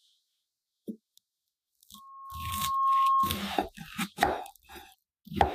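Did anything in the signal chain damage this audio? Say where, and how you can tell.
Yes. Loudspeaker feedback squeal, in the acoustic loop from playback back into the microphone. At 1.94 s a 1.1 kHz tone appears. It swells over about a second to roughly 10 dB above the sound, then stops at 3.47 s. Loop gain there exceeded one.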